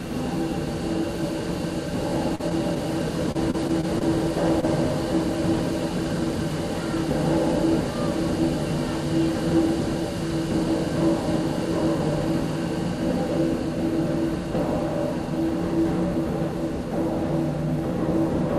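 At 2.35 to 2.41 s there is a short concealed packet loss. About 20 ms of audio never arrived in time. The receiver covered 38 ms by extending the preceding sound, with a small timing shift. It is heard as a brief smear.

From 3.32 to 4.03 s comes repeated packet loss, with a robotic sound. Five separate gaps occur, the longest 30 ms. About 80 ms is lost and 111 ms is patched, roughly 16% of the stretch. The sound turns choppy, with pieces missing.

At 4.61 to 4.65 s there is a short stall from a late packet. The jitter buffer ran dry, so the last sound was stretched by 20 ms until the packet arrived. Nothing is missing. The delay grew by 20 ms, and a sound lingers briefly.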